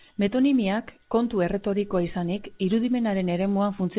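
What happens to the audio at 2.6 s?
Nothing goes wrong at 2.6 s: the speech carries straight through with its steady telephone-band character from G.711 mu-law coding at 8 kHz sampling.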